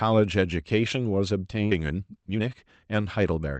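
At 1.71 to 1.73 s there is a skip ahead: roughly 0.7 s of speech was dropped and playback jumps forward, the two sides spliced with no gap. Jitter buffer speed-up follows from 1.81 to 2.41 s at 126% and again from 2.87 to 3.55 s at 111%. The receiver repeatedly trims short pitch-period pieces, about 150 ms and then about 70 ms in total, so the speech sounds hurried at unchanged pitch. The call path's coding noise and a top end near 8 kHz are audible throughout.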